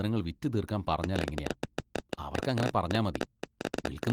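Speech, with a train of clicks from 1.04 s to the end: about 12.8 irregular ticks per second, well above the voice, likely from nearby equipment interference or a faulty connection or power supply.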